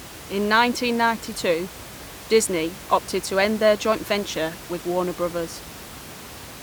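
No technical faults occur anywhere in the speech, and the only background is the room's own noise, sitting about 17 dB below the voice.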